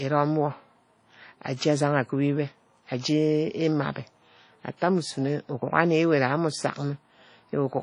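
Throughout the speech, the sound is dull and swishy, with nothing above 10.1 kHz, likely low-bitrate audio saved at a high bitrate, fitting a 32 kbit/s encode re-saved as 192 kbit/s MP3.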